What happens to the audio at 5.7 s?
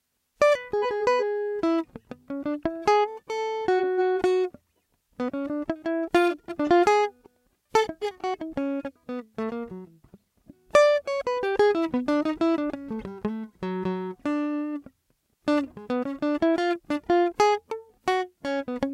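At 5.7 s the music plays through intact, with no dropout, click, distortion or other fault at that moment.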